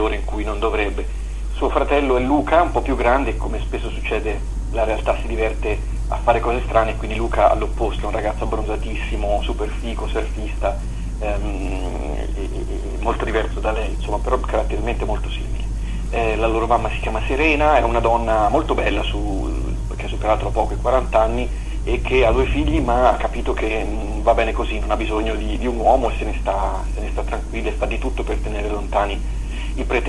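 No technical faults are audible.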